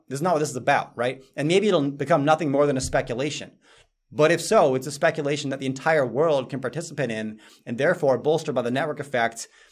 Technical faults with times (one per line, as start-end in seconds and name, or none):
none